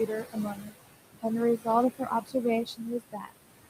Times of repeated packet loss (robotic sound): none

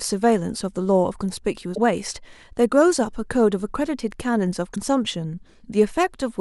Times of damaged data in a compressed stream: 1.71-1.78, 4.72-4.77

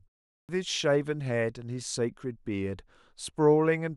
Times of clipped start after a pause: 0.41-0.49

